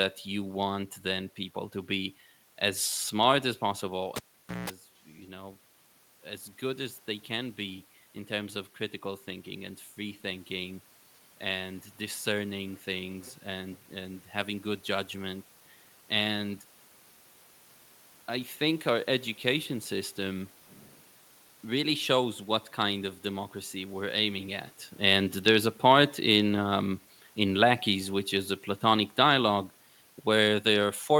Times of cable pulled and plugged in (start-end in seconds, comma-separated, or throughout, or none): 4.16-4.70